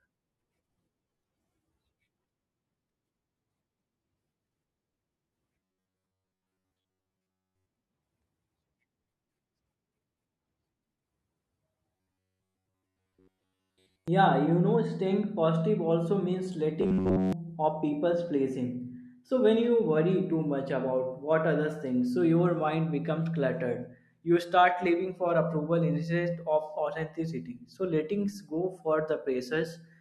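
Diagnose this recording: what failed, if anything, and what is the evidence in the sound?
Robotic sound from repeated short buffers at 5.59–7.67 s, 11.96–14.08 s and 16.81–17.33 s (just before "of people's"). The speech becomes a rigid metallic buzz fixed near 94 Hz, not silent dropouts. This points to a starved driver buffer, likely looping about 11 ms blocks over most of each stretch.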